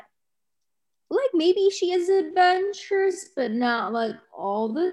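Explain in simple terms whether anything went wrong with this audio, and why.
A time-stretched section runs from 1.93 s to the end of the speech. At that point the pace suddenly drops to about half speed (0.505 times), while the pitch stays the same. The likely cause is software lengthening this part to fill a set duration, keeping the pitch steady by repeating tiny slices of sound. This makes the slowed speech drag.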